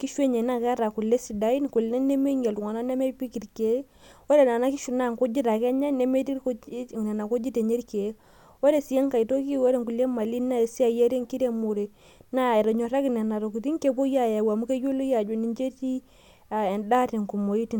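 A recording of speech with no technical faults to report. Nothing in the audio calls for a time or a cause to be noted.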